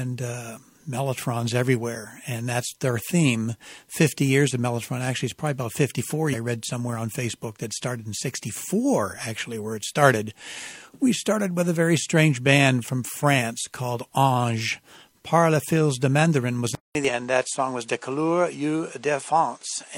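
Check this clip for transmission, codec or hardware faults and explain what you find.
Two kinds of fault turn up here, one of them twice.

Damaged data in a compressed stream hits at 6.29 to 6.35 s, just before "read somewhere on", and again at 17.05 to 17.10 s. Both times the decoder chokes on corrupted frames, loses sync and hunts for the next header, so you get a brief glitch.

From 16.75 s to the end the sound drops out for about 200 ms and comes back duller, with nothing above 10.5 kHz and a new noise floor about 35 dB under the speech. The loudness doesn't really change. That's likely the input switching to a poorer device.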